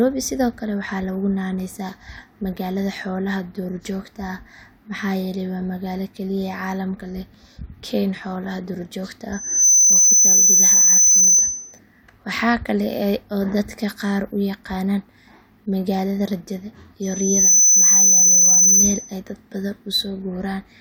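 Loudspeaker feedback squeal at 9.32–11.79 s and 17.02–19.15 s. The microphone hears its own loudspeaker. A 6.1 kHz tone swells within a fraction of a second, about 10 dB above the speech.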